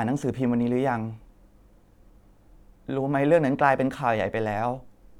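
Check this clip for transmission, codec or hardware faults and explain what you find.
Listening to the speech, nothing stood out that would suggest a problem with transmission, encoding or the recording hardware.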